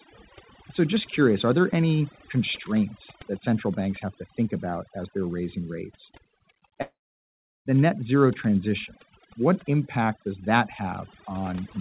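A speech clip, heard through a narrowband call path with nothing above 4 kHz, marked throughout by overdone noise removal: the background sinks to near silence sprinkled with twinkling specks. That points to a suppressor cutting individual frequency bands outright rather than a codec smearing detail evenly. From 6.82 to 7.68 s the audio stops. A brief fading tail of the last sound gives way to roughly 0.73 s of silence before speech resumes at "the net zero transition" with that stretch missing, not delayed. This is likely a long network dropout, distinguished from a short packet-loss glitch by its length.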